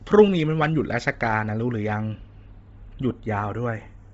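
Channels drifting apart, throughout the clip: the two channels run on clocks that disagree by roughly 30 ppm, so the offset between them creeps to about a tenth of a millisecond, giving a slowly moving flanging when summed.

Bluetooth LC3 compression, also throughout: the speech sounds breathy and grainy, with nothing above 7.7 kHz. The heavy damage likely comes from the LC3 codec, consistent with 24 kbps and 7.5 ms frames.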